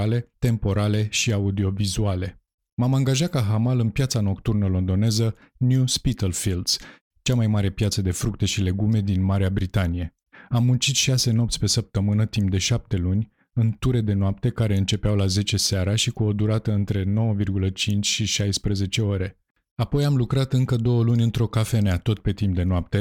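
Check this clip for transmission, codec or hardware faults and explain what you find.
Nothing to report; the recording shows no faults at all.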